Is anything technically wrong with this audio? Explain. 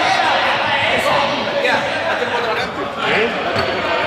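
Yes. From 2.58 s to the end, there is a section at the wrong speed. It plays at 0.893 times the original rate, likely from being fitted to the wrong clock. Speed and pitch drop together. The sound turns slower and deeper, about two semitones lower.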